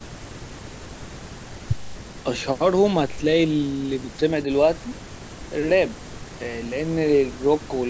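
Nothing stood out on listening to this speech, which carries the trimmed low bass and the top near 8 kHz that call microphone processing leaves behind.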